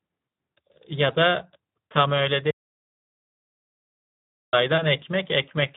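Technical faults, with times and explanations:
throughout, Speex codec: plainly hoarse, noisy speech with nothing above 3.8 kHz, as the CELP excitation is starved of bits, which fits a low setting near 11 kbps.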